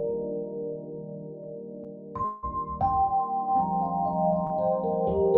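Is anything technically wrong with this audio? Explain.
Yes, there are two dropout-type glitches.

From 2.25 to 2.45 s the last sound is held for about 180 ms as a buzz or hiss that fades. This is a call audio freeze, likely from delayed packets draining the jitter buffer. Nothing is lost, so everything after runs late.

At 4.47 to 4.57 s there's a short stall from a late packet. The receiver stretches the last sound by about 32 ms, giving a held sound with a slight buzz or dip before it carries on intact.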